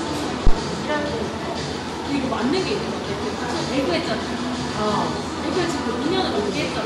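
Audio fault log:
0.47–0.55 s, phantom power thump: a single deep low-frequency thump breaks into the sound, peaking at about -3 dBFS and dying away with a decay of around 18 ms, so the whole event is over in under a tenth of a second. A supply voltage was switched on or off on the live input, and that sudden DC step passed through the input's coupling capacitors before they settled. This produces the brief, heavy bass pulse rather than a click.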